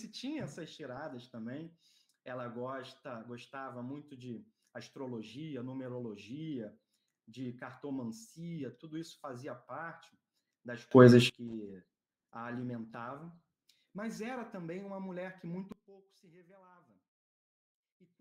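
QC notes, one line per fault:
10.91 to 11.30 s, sudden gain jump: the sound and the background noise leap up together by about 24 dB with no ramp, then fall back. That's likely a gain setting or bit shift applied instantly from one sample to the next.
11.51 to 13.75 s, call bitrate drop: the audio turns rough and watery for a little over 2 s, with the top end dulled. That fits the encoder being pushed from roughly 96 kbps down to about 28 kbps and coding coarsely until it recovers.
15.72 s to the end, sudden gain jump: here everything, noise floor included, drops abruptly by about 19 dB and stays down to the last sample. The one-step change points again to an unramped digital gain change.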